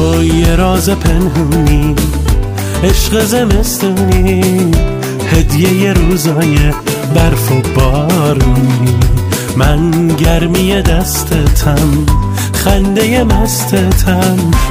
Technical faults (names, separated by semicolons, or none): none